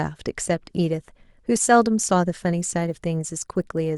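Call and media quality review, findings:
Resampler restarted on every block, 2.58 s to end: 50 Hz buzz under speech, only with signal. Each 20 ms block converted separately, edges lacking neighbours. Spectrogram: vertical striations every 20 ms. Waveform: small steps at block boundaries.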